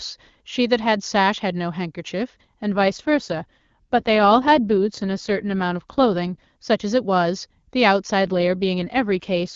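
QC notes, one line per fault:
2.72 to 6.44 s and 8.26 s to the end, AMR rate drop: speech goes rough and synthetic, likely a weak link pushing AMR-WB from clean 23.85 down to 8.85 kbit/s. Band stays the same, no gaps.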